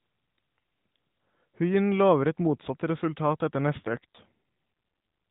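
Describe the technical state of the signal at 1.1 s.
At 1.1 s the speech is intact, with no fault, only the narrowed band of the AMR narrowband mobile codec, which stops everything above 4 kHz.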